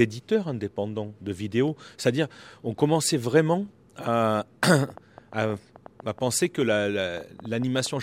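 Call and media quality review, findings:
Train of clicks, 4.84–7.87 s, after "on commençait vraiment à": roughly twenty similar pulses, about 7.6 per second, irregular spacing, near speech level. Likely interference or a struggling interface.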